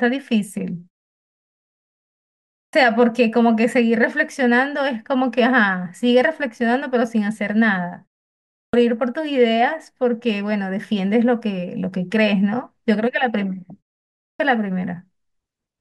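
Speech resumes abruptly three times, with its opening sounds missing. At 2.50 s, after a pause of about 1.7 s, roughly 0.23 s is lost up to 2.73 s. At 8.47 s, after a 0.48 s pause, about 0.26 s is lost up to 8.73 s. At 14.16 s, after a 0.42 s pause, about 0.23 s is lost up to 14.40 s. This is a clipped start after a pause: the output device goes to sleep during silence and takes time to wake or relock, so the first part of the returning sound is swallowed.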